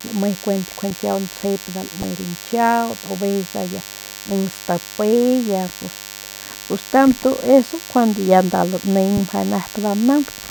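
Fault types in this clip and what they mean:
DECT cordless phone buzz: a thin, steady 100 Hz buzz rich in harmonics under all the speech, about 15 dB down. It is harsher and buzzier than smooth mains hum.
corrupt frame decoded: damaged frames played anyway cause short chirpy bursts at 0.90 s and 2.00–2.04 s. Wrong sound is inserted, unlike a dropout's silence.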